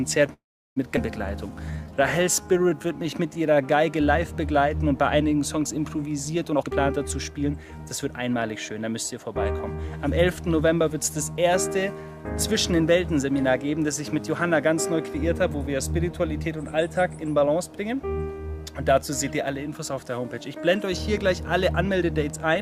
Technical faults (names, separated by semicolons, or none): call audio freeze; skip ahead; jitter buffer slow-down; jitter buffer speed-up